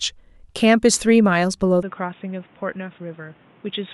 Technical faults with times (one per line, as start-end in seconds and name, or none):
1.83-3.93 input switched to a poorer device